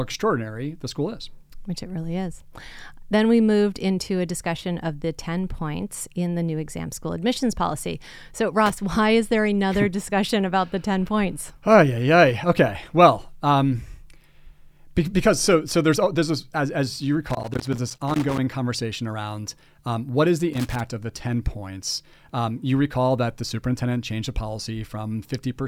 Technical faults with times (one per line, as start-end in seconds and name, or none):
8.66-8.74 loose connector crackle
17.29-18.38 loose connector crackle
20.53-20.80 loose connector crackle